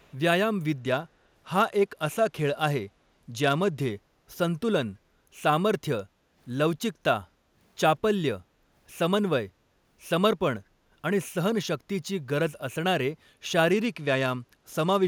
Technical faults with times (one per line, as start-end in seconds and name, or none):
0.00-0.15 echo leak
0.80-3.90 Bluetooth SBC bit pool drop
6.10-6.35 background gated by the echo canceller
7.28-7.55 background gated by the echo canceller
13.71-15.07 Bluetooth SBC bit pool drop